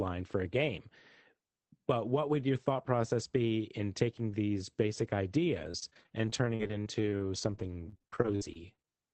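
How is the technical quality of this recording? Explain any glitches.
The speech carries one clear fault: repeated packet loss (robotic sound), from 5.57 s to 8.89 s, just after "in taking these basic". Along the call route, packets kept going missing or arriving too late. Each hole was bridged by stretching the preceding sound forward, and the gaps came so close together that about a second of audio ended up rebuilt this way. About 27 short dropouts land in that stretch, the longest around 55 ms, with roughly 18% of the span concealed. The result is choppy, robotic speech with fragments missing. The whole clip is also band-limited at 8 kHz, consistent with an Opus call stream at around 24 kbps.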